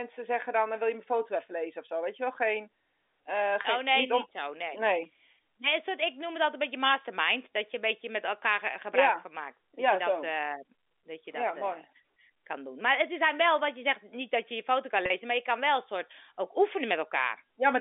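Packet loss with pitch repetition hits twice. At 3.62 s about 20 ms of audio goes missing, which fits a single lost packet. The receiver fills the hole by repeating the last pitch period, so the speech briefly holds with a slight buzz. At 15.06 to 15.10 s, between "je je foto kan" and "maar je kan wel", a 40 ms gap is bridged the same way, producing a longer held tone. Both events sit within the narrow 300 Hz to 3.6 kHz G.711 telephone band.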